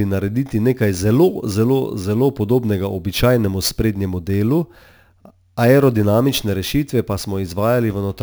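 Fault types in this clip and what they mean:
Imaging from sample-and-hold upsampling: the speech sounds as if it was raised from a 16 kHz rate to 44.1 kHz by holding each sample with no smoothing filter. Mirror copies of the spectrum therefore sit above the original band, the first filling 8 to 16 kHz at about 22 dB below the speech. This gives a bright metallic fizz that rises and falls with the speech, and its lowest copy moves opposite to pitch changes.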